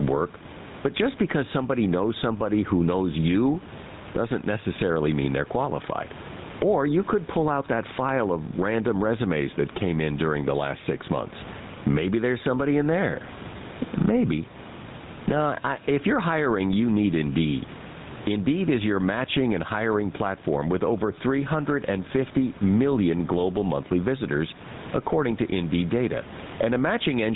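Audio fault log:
throughout: gain pumping. The gain swings by around 15 dB, and the room noise sits about 28 dB below the speech. This likely comes from excessive input gain driving a fast limiter, which squashes the dynamics.
throughout: GSM full-rate codec. Nothing passes above 3.9 kHz, and the speech carries a plainly audible buzzy, gravelly roughness. A vocal-tract model driven by a sparse, regularly spaced pulse excitation produces this grain, which fits the 13 kbps GSM full-rate codec.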